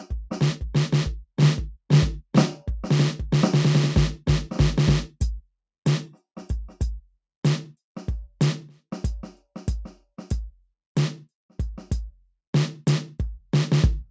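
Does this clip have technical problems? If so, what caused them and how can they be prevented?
No, there's nothing wrong here; the music just shows the normal marks of a call's microphone processing, with the deepest bass trimmed away and nothing above 8 kHz, so there's nothing to prevent.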